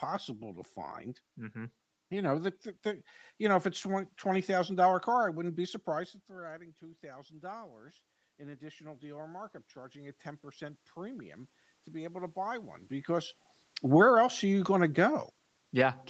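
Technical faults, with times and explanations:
6.27–7.84 s, automatic gain rising: just after the level drops by about 18 dB, as the talker moves away from the microphone near 6 s, the gain control lifts its gain by about 4 dB over roughly 1.6 s, so the speech and the room noise behind it swell up together.
8.38–12.87 s, automatic gain rising: with the input still about 18 dB down, the gain climbs a further 7 dB or so across about 4.5 s. Speech and background rise as one, slowly, rather than the talker sounding closer.
13.8–15.95 s, automatic gain falling: once the talker moves again around 12.5 s, the control finds the input too loud, or its background noise too strong, and pulls its gain down by about 4 dB over about 2 s, so the sound sinks together with its background.
14.13–14.6 s, automatic gain rising: a short upward correction of about 6 dB over about half a second sits inside that fall, so the level briefly lifts, speech and noise together, before the downward drift continues.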